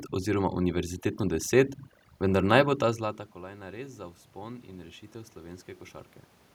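Overdone noise removal runs through the whole speech clip: the noise reduction is set so hard that frequency bands near its noise estimate are pulled down or shut off, taking the quiet parts of the voice with them. The room noise collapses into near silence flecked with twinkling specks.

From 2.97 to 5.72 s there is automatic gain rising. The input has dropped by about 19 dB, as the talker moves away from the microphone around two and a half seconds in, so the gain control slowly adds about 4 dB. Voice and background swell together over those few seconds.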